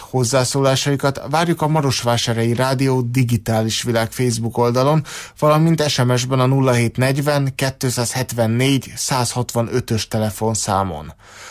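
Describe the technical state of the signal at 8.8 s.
At 8.8 s the signal is intact, with no dropout, clipping, distortion or other fault to be heard.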